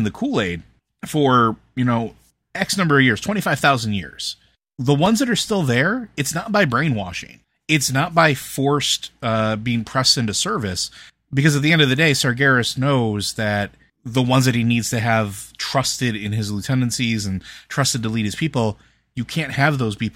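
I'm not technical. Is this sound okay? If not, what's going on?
No. Three tiny ticks occur at 1.00 s, just before "for you know", at 3.19 s, right after "number of years", and at 5.06 s, before "that are still there". Each is a block of digital silence: the sound cuts out for under 2 ms and snaps back without fading, so you hear a click rather than a gap.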